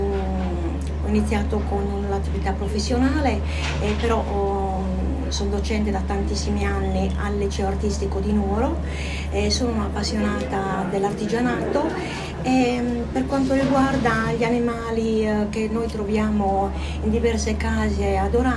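No technical faults can be heard anywhere in the audio. Nothing in the recording calls for a timestamp or a fix.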